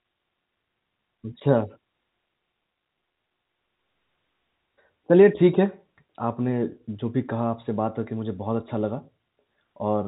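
No faults: the speech passes over a call path with nothing above 4 kHz, a band limit that fits narrowband G.711 mu-law coding at 64 kbps.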